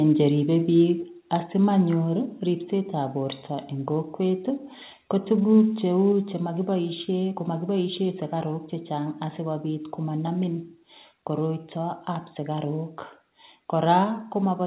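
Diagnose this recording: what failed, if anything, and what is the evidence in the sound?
The fault sits in call processing, and it is a microphone volume stepped down. The speech level drops abruptly at 1.02 s and 2.04 s, by about 1 dB each time. Larger drops of about 2 dB follow at 6.12 s and 14.04 s. Each step is instant, with no fade. The likely cause is the call software's gain control cutting the device input volume in discrete steps. The narrow band, with nothing above 4 kHz, fits a G.711 mu-law path.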